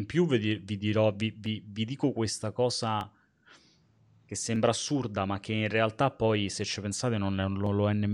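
After "vi vi dirò vi", clicks recur every 1.55 s from 1.46 to 7.66 s. These sound like clock drift buffer slips, likely from mismatched device clocks.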